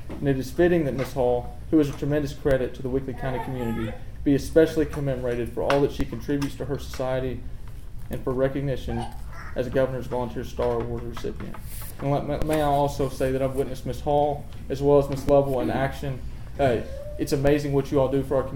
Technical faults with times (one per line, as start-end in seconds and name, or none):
2.51 DC step
6.00 DC step
12.42 DC step
15.29 DC step
17.47 DC step